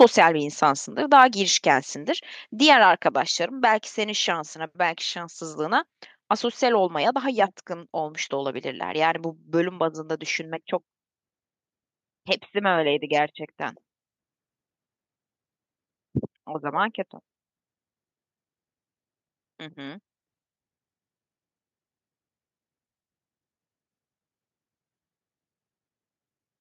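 Microphone overload from 0.0 to 0.25 s gives the opening syllables a harsh, crackly edge. The input level was likely set too high, so peaks overshoot the converter's ceiling by about 4 dB and their tops are sheared flat across a small share of samples.

Microphone volume stepped down at 0.04 s, inside that distorted burst: speech and background drop abruptly by about 4 dB. This is likely the call software reacting to the clipping by cutting the device's input gain in a single step.

Microphone overload returns from 1.19 to 1.23 s as a brief crackle on a loud peak. The input likely still sits slightly too hot, with peaks exceeding the converter's limit by about 1 dB and a small fraction of samples flattened.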